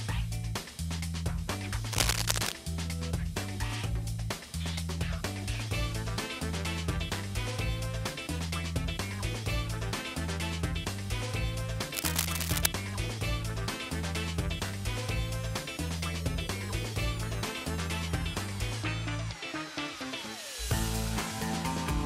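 From 1.93 to 2.52 s, and again from 11.90 to 12.66 s, a burst of cable scratch noise sits over the sound: dense, irregular crackling and rustling, roughly as loud as the wanted signal itself. Each burst lasts well under a second and then clears. The likely cause is a worn cable, connector or control being moved, so that its contact resistance fluctuates rapidly and injects uneven noise bursts into the signal path.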